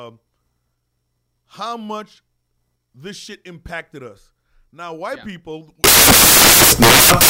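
From 5.84 s to the end, samples built from the wrong bytes: misassembled bytes promote the jittery low bits, so the speech collapses into loud, harsh broadband noise.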